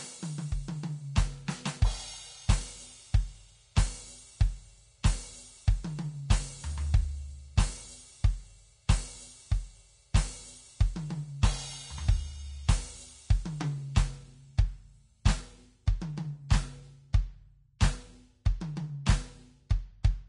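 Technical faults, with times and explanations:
Throughout, Vorbis compression: the music has a hissy, grainy top end, with nothing at all above about 10.6 kHz, tones that sound roughened, and attacks that smear instead of snapping. That's likely a low-bitrate Vorbis encode, somewhere around 30 kbps judging by how plainly it shows. At that rate the encoder drops the highest band entirely and quantises the remaining treble so coarsely that the fine detail turns into noise-like fizz of similar loudness.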